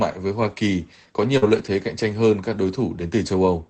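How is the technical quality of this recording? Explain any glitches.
The recording has two closely linked packet-loss glitches, both packed into roughly 1.37 to 1.68 s. It came through an Opus call path, and the top end stops at about 8 kHz.

At 1.37 to 1.44 s there's a short concealed packet loss. About 40 ms of audio never arrived in time, so the decoder papered over it by stretching the preceding sound forward, carrying its pitch where it was voiced and using shaped noise where it wasn't, for about 44 ms before blending back into real audio. To the ear it's a quick smear or wobble, and any short consonant sitting in that gap can simply drop out.

Overlapping that, from 1.42 to 1.68 s, you get lost packets rebuilt from error correction. Several separate packets went missing here, but each following packet carried a low-bitrate spare copy (Opus in-band FEC), and the decoder played those instead of leaving holes. 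That covers about 140 ms in total, spread through the stretch. There's no dropout, but those patches sound rougher and grainier than the audio around them.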